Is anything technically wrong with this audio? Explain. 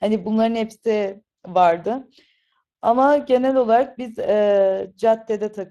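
Yes. Speex codec damage runs through the whole speech clip, and it's plainly audible. Speex is a CELP coder: it models the vocal tract with a filter and spends its bits describing the excitation that drives it. At this setting there aren't enough bits for that excitation, so the speech comes out noisy and hoarse. The degree of damage fits a middle setting of roughly 22 kbps.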